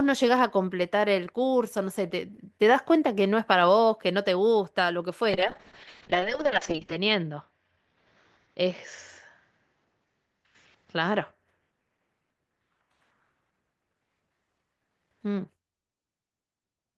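From 5.31 s to 11.39 s, a call bitrate drop occurs: the connection's bandwidth estimate collapses and the encoder is forced to spend far fewer bits, which fits a fall from around 32 kbps to roughly 6 kbps. The speech turns coarse and watery, and the top end is cut, with the upper limit falling from 20 kHz to 8 kHz. It is worst for about 1.66 s at the bottom, then recovers by 11.39 s.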